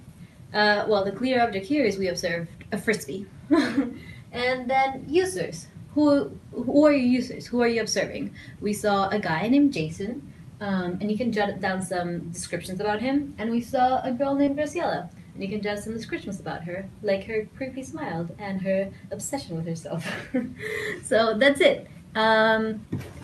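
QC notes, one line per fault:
14.45–14.49 s, short concealed packet loss: roughly 20 ms of audio missed the decoder's deadline, so the receiver extended the preceding sound to bridge the gap and then blended back, leaving a brief smear, heard within a call path whose top end stops near 12 kHz.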